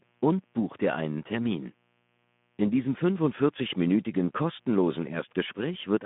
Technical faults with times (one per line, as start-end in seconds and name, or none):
0.00-6.05 mains buzz
0.00-6.05 Speex codec